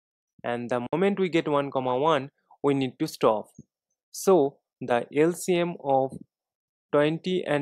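From 0.86 to 0.93 s the sound drops out, losing 56 ms, then resumes further along, likely a Bluetooth dropout from late packets.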